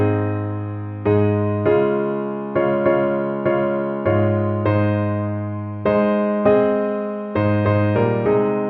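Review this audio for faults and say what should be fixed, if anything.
No faults turn up in this audio, so nothing needs to be fixed.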